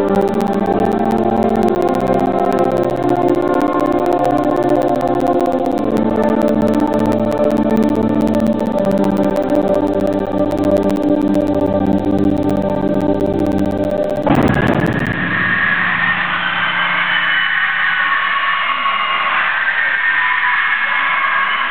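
The audio has periodic USB or driver dropouts from 0.09 s to 15.13 s. Every 64 ms, a gap of around 10 ms is replaced by silence. That makes about two hundred regular ticks. A recurring task blocking the bus or driver causes this.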